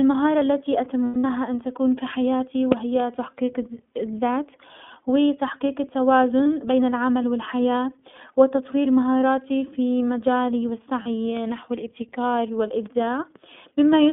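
iLBC codec, throughout: the speech is confined to roughly 150 Hz to 3.5 kHz and has a slightly rough, synthetic edge, plainly audible. That fits iLBC coding each 20 ms frame independently, likely at its 15.2 kbps mode.

Lost iLBC frames occur from 1.04 to 1.26 s, at 6.44 s, and from 11.02 to 11.07 s. At these points the decoder filled missing packets by repeating the last pitch cycle with added noise. The first event is the worst, with 180 ms lost across about 200 ms and the longest stretch around a tenth of a second. These gaps sound like a briefly held, buzzy vowel. Clear speech returns almost at once.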